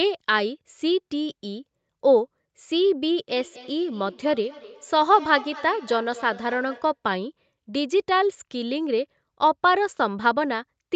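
From 3.29 to 7.0 s, feedback echo between two devices: a second device replays the speech into the microphone, so each word returns about every fifth of a second, up to about 18 dB below it, as thin ringing repeats. A spectrogram shows faint, evenly spaced copies of each syllable.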